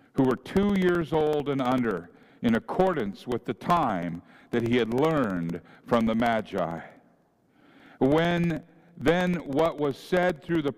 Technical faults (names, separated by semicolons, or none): periodic USB or driver dropouts